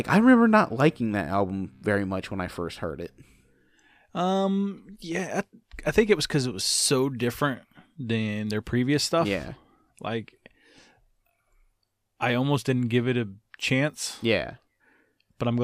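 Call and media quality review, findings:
Nothing to flag on this speech recording; no faults turned up anywhere along the way.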